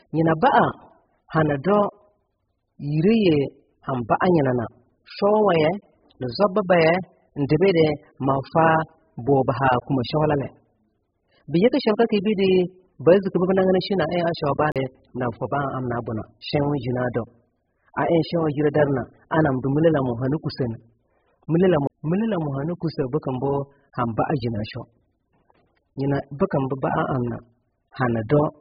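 The whole 28-second recording is dull and smeared, with nothing above about 5.1 kHz. The speech has a watery, warbling texture, and sibilants come out fizzy instead of crisp. That's heavy AAC compression damage, most likely from AAC-LC running at a very low bitrate of around 8 kbps. At that rate the encoder lowers its cut-off, drops or noise-fills bands it can't afford, and the warble follows.

At 14.72 to 14.76 s there's a CD skip. The sound drops out for roughly 40 ms and picks up somewhere else. A knock or a disc flaw sent the laser to a different turn of the spiral, so the player muted briefly before carrying on from the new spot. A second CD skip hits at 21.87 to 21.90 s. This one has a slightly shorter dropout of around 30 ms, with the same abrupt jump in the speech.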